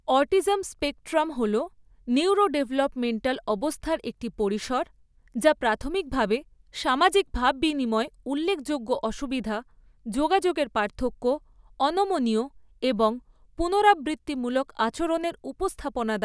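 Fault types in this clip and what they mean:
Nothing to flag here; the speech comes across without any technical faults to speak of.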